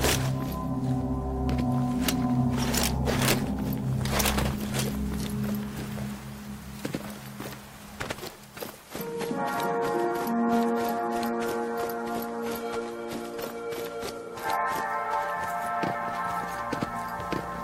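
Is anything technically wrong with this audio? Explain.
Yes. Violent, snapping cracks hit the loud moments at 0.04–0.13 s, 2.09 s, 2.78–3.31 s, 4.20–4.28 s and 4.79 s, far harsher than clipping. This is integer overflow: peaks pushed up to about 6 dB past the integer limit wrap to the opposite sign instead of being held.

From 8.85 to 14.85 s the treble suddenly thins, with nothing above 14 kHz and more codec grit, then quality returns without any gap. This is an adaptive stream at a lower bitrate, which fits a switch from about 96 to 48 kbit/s AAC.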